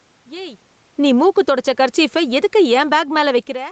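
Speech that, right after "ஏய் நீ" at 1.08 s, starts sinking steadily in level along with its room background until the end, an automatic gain falling effect where the gain control judged the input too loud and kept turning it down. Between 1.58 and 2.06 s the voice and background briefly swell by about 3 dB, automatic gain rising, as the control reversed and raised gain for a moment. The missing content above 8 kHz fits the call codec's bandwidth.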